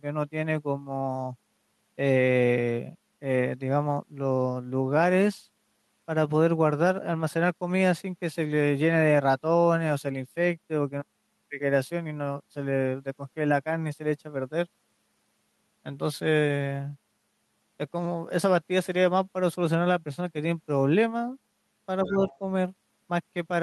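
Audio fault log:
22.06–22.38 s, other side's voice leaking through: a second, fainter voice sits under the speech for about a third of a second near the end of the clip, roughly 15 dB below the main talker. The likely cause is loudspeaker playback of the far end reaching the microphone, with the echo canceller leaving a residue it failed to subtract.
22.10–22.41 s, speech suppressed in double talk: over the same stretch the main talker's level sags by around 5 dB, with the dip totalling about a fifth of a second across the span. The overlap with the leaking far-end voice points to double talk. The canceller likely could not tell the near talker from the echo while both were active, so it attenuated everything in the microphone path, pulling the wanted speech down along with the echo.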